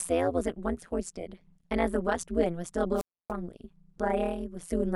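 Overlap-add ripple runs through the whole of this speech clip. The level swings by about 60 dB roughly 150 times a second, giving a harsh, buzzy, robotic flutter. The audio was split into overlapping windowed frames and rejoined with windows whose overlap does not add up to a steady gain, so the loudness rises and dips once per frame. A modulation that deep, near 150 Hz, nearly chops the signal into a rapid train of pulses. A wireless microphone squelch dropout occurs from 2.95 to 3.32 s. The analogue FM link fades, hiss and static swell, and then the receiver's squelch gate shuts the output for about 0.29 s, leaving a hole of near silence. The signal comes back as the link recovers.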